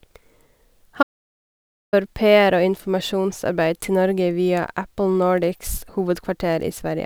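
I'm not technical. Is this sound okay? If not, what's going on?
No. A playback stall runs from 1.02 to 1.94 seconds: the speech cuts out into silence for about 0.9 seconds, then carries on. The likely cause is the player running short of audio data, or being held up, and waiting until it caught up.

A bit error spike sits at 6.62 seconds: a single sharp tick. A tiny piece of the stored or transmitted data got flipped for a few samples, so the sound jumped abruptly to a wrong value and straight back.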